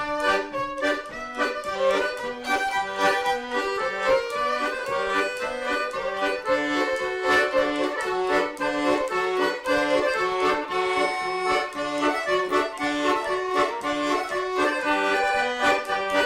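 No audible technical faults anywhere in the recording.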